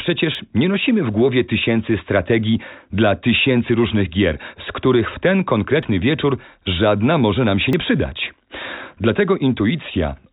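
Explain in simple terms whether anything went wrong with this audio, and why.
Three small skips can be heard, at 0.35, 5.83 and 7.73 seconds. Each sounds like a jump in the speech. The likely cause is a dropped buffer (overrun). The program fell behind, so tiny pieces were lost, the one at 7.73 seconds a bit longer.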